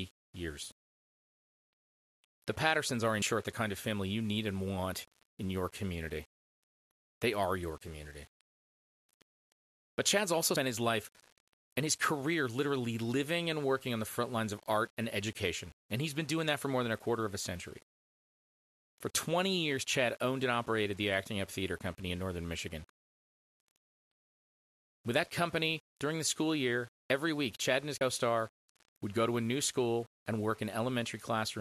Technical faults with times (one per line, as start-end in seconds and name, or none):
0.00-31.60 low bit depth without dither
3.22 compressed frames skipped
10.56 compressed frames skipped
28.01 compressed frames skipped